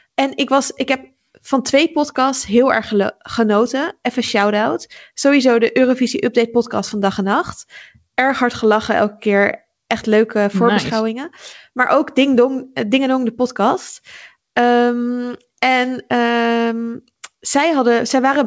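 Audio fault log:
No faults detected.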